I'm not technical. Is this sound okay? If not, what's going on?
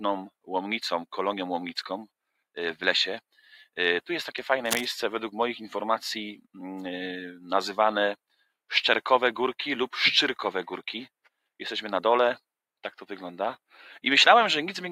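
No. Two faults stand out.

Between 3.32 and 3.77 s, there is sound cut by the noise suppressor. The noise-reduction processing mistakes part of the sound for background noise and turns it sharply down, for about a fifth of a second in total.

From 4.65 to 4.87 s, a rough scratching burst nearly as loud as the sound itself sits on top. This is cable scratch noise, likely from a worn cable or connector being moved.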